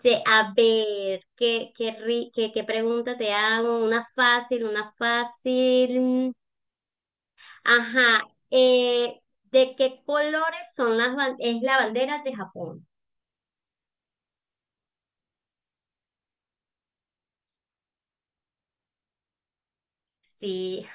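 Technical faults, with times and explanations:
No technical faults can be heard anywhere in the recording, and the signal stays steady from beginning to end.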